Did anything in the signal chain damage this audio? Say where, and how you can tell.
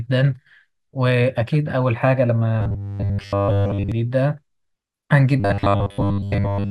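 Yes. At 2.61–3.92 s and 5.40–6.70 s the speech becomes a rigid 100 Hz metallic buzz: robotic sound from repeated short buffers, likely a starved driver replaying 10 ms blocks.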